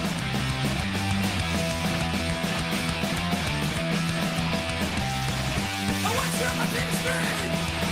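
Nothing goes wrong anywhere in the audio, so there's no technical fault to describe.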